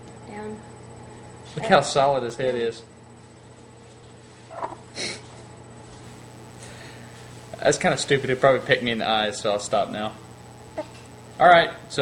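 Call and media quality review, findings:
Dropped buffer (overrun) at 2.3 s: capture side likely failed to read samples before the hardware overwrote them, so a millisecond or two is lost and the sound joins directly across the gap. Heard as a jump.

Mains buzz from 6.04 s to the end: unshielded or rectifier/dimmer-coupled path admitting switching spikes twice per 60 Hz cycle, with harmonics reaching several kHz. Heard as a steady raspy buzz about 30 dB below the signal.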